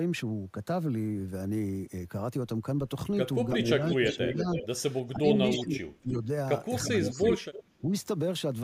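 Speech suppressed in double talk at 3.54–4.58, 5.13–6.28, 6.87–7.47 and 7.81–7.86 s: the voice dips by as much as roughly 30 dB, likely because an echo canceller turned everything down while both sides spoke. Echo leak at 3.7–4.15, 4.53–4.67, 5.08–5.64 and 6.84–7.8 s: a copy of this speech returns about 325 ms later, some 5 to 10 dB quieter, likely loudspeaker pickup the canceller failed to remove.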